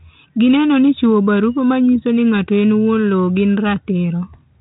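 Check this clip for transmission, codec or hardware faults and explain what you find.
No transmission, codec or hardware faults turn up in this clip.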